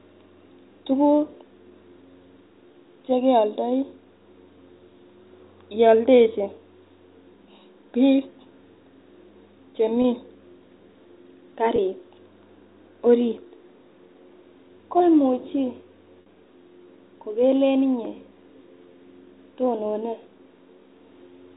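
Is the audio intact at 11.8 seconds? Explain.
No. From 11.76 to 11.78 s there is packet loss with pitch repetition. About 20 ms of audio drops out, consistent with a single lost packet. The receiver fills the gap by repeating the last pitch period of the speech, so the gap sounds like a brief, slightly held, buzzy sustain rather than silence. The surrounding telephone-band G.711 coding is audible as the usual 4 kHz ceiling.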